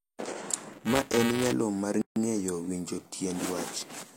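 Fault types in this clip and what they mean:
Buffer tearing: the ring-buffer writer and reader cross each period from 0.73 to 1.53 s, before "mar ng’eyo winjo". A stale slice a few milliseconds old gets spliced in, buzzing at 345 Hz (fitting a 128-sample buffer). The waveform shows regular steps and the spectrogram dense vertical lines.
Gap at a join of encoded pieces: separately encoded pieces were joined with encoder delay and padding left in, so a 146 ms gap opens from 2.02 to 2.16 s before "ng’eyo winjo". The waveform drops flat between smeared edges, and the spectrogram shows a blank vertical band.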